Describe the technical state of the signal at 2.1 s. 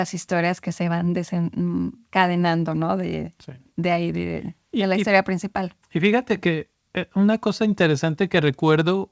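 At 2.1 s the speech signal is intact with no fault, carried through the G.722 call path with its band ending at 8 kHz.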